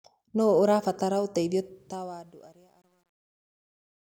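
Just after "ũrabatara ũteithio", at 1.60 s, truncation distortion enters the fade-out. The level stage drops bits without dither, which fits a 10-bit stage. From 2.26 s to 4.01 s the decaying speech turns gritty.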